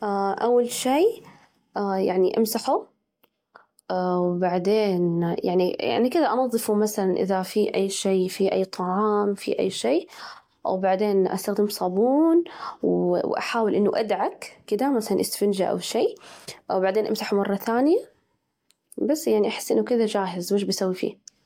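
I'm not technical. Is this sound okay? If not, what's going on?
Yes, this sound is okay, and nothing is going on that needs fixing.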